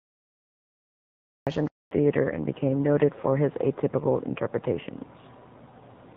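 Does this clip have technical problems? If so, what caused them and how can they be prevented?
Yes. Cut-off start, 0 to 1.47 s: digital silence until the recording starts abruptly mid-sound at 1.47 s, with no natural attack, because capture began late. Start recording before the talker begins, with a short pre-roll buffer.

Handover gap, 1.67 to 1.91 s: the speech dies out for 240 ms while the call switches networks and no frames arrive, so that stretch is lost. Schedule handovers during pauses, or use make-before-break handover so the new link is ready before the old one drops.

Fallback to narrowband, 1.91 s to the end: the clear wideband sound of the first moments gives way to duller, rougher speech with nothing above 4 kHz, which points to a switch from about 12.65 kbit/s AMR-WB to a 7.4 kbit/s AMR-NB mode. Ensure both networks support HD Voice so calls keep the wideband codec through a handover.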